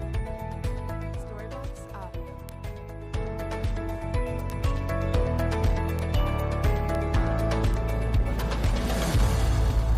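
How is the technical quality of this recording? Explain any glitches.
Five isolated ticks mark the recording, at 2.49, 4.5, 5.99, 6.95 and 7.74 s. Each is a bit error spike: a flipped bit throws one sample, or three at 6.95 s, to a wrong value, peaking near -12 dBFS early and -18 dBFS later, heard as a brief broadband click unrelated to the sound.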